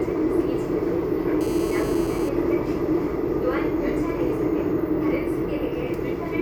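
From 1.41 s to 2.29 s a hard, raspy buzz sits steadily under the sound at about 16 dB below it, pitched at 217 Hz and rich in harmonics. This is GSM phone buzz: a nearby 2G phone on a call pulses its transmitter 217 times a second, and the audio circuitry rectifies those bursts.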